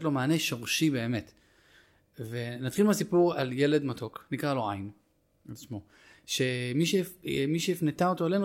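Speech with a DC step at 7.35 s: the waveform's zero line jumps by about -42 dBFS and then drains away, which fits an offset passing through a roughly 20 Hz high-pass stage, as when a converter recalibrates or an offset input is switched in. It comes across as a single low thump or click beneath the speech. Unlike a dropout click, nothing is missing and the speech runs on uninterrupted.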